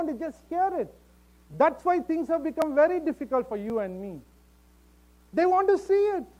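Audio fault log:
0.46 to 5.86 s, clock drift buffer slips: two devices on the path are likely running on separate clocks that disagree by about a tenth of a percent, so the buffer between them steadily fills or drains until a small block of a few dozen samples is dropped or repeated to catch up. Each of these jumps breaks the waveform's continuity, heard as a short click recurring every 1.08 s across this span.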